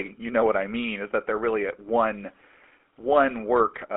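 Throughout the speech, GSM full-rate codec damage is plainly audible: a buzzy, gravelly roughness from pulse-driven vocal-tract modelling, consistent with 13 kbps. The band runs only from about 250 Hz to 3.4 kHz, so a spectrogram shows nothing above 3.4 kHz and little below 250 Hz.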